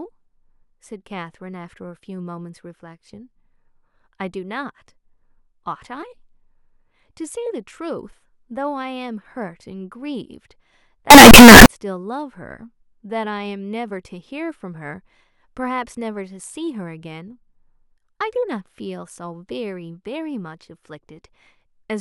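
From 11.10 to 11.66 s the speech turns into a blast of very loud, harsh distortion lasting just over half a second. The likely cause is signed and unsigned mixed up, which fits 16-bit samples. With the top bit flipped, every zero crossing jumps across the whole range. Unlike ordinary clipping, which only flattens loud peaks, this makes quiet moments as loud as everything else, so the burst has no dynamics at all.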